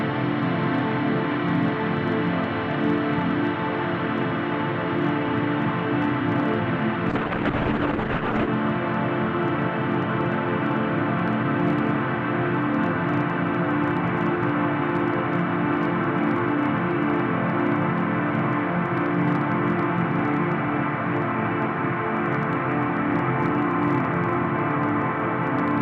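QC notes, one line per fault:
Throughout: hard clipping. Peaks are driven about 4 dB past full scale and cut flat, so a small fraction of samples crackle. The crackle comes only on loud moments, unlike steady fuzz.
7.15–8.59 s: call bitrate drop. The encoder falls from 96 to 11 kbps for about 1.4 s, so the sound turns watery and muffled, then clears when the bitrate recovers.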